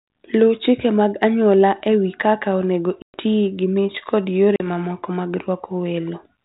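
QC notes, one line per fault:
3.02 to 3.17 s and 4.56 to 4.66 s, packet loss on an ADPCM call: hard-edged silent gaps after "e wi kaka onego" and "gi mich kod", then brief, slight distortion as the speech returns. About 120 ms and 40 ms of G.726 audio were lost, and the decoder's adaptive predictor and step size fell out of step until they resynchronised.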